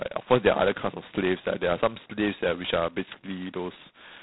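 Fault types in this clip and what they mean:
G.726 ADPCM: Each sample is coded as a small difference from an adaptive prediction. Here the coding is coarse enough to fit the 16 kbit/s mode, so a harsh, rasping hiss rides on the speech and tracks its level. Nothing passes above 3.9 kHz.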